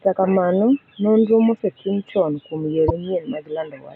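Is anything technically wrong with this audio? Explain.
Yes. Damaged data in the compressed stream shows up at 2.86 s, right after "nonro mosetim chon kuom", lasting until 2.91 s. Part of the encoded speech there was corrupted, so the decoder could not read those frames properly, lost its place in the stream and had to hunt for the next valid frame header before resuming. What reaches the ear is a brief glitch of about 44 ms that breaks into the speech.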